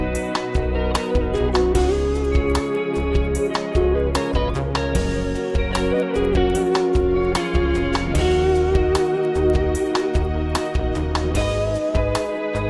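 From start to end, the resampler is restarted on every block. Each 250 ms block is converted from 48 kHz to 24 kHz on its own. The converter lacks the neighbouring samples at each edge. This leaves regular ticks at 4 Hz, heard only while sound plays.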